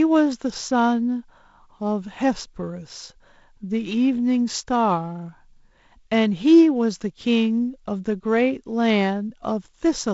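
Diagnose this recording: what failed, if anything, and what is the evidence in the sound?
Nothing stood out on listening to this speech recording, which has been carried through G.722 wideband telephone coding with its light upper-band hiss and no content above about 7.7 kHz.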